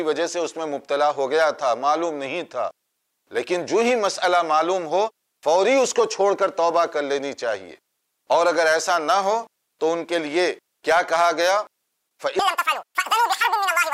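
From 12.39 s to the end at 13.93 s, the audio is read two samples at a time, so it plays at double speed, an octave higher.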